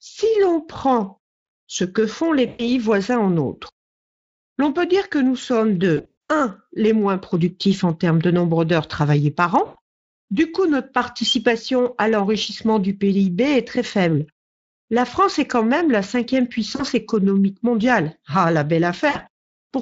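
Over the light Speex coding, there are five dropouts from VoIP packet loss concealed by the speech codec: at 2.47 s after "ce que font les", 5.97 s, 9.65 s after "nombre d'heures travaillées par", 16.75 s before "économique mondiale", and 19.09 s. The decoder stretches the last sound into a fading buzz over gaps of 40 to 220 ms, leaving the sound weak briefly afterwards.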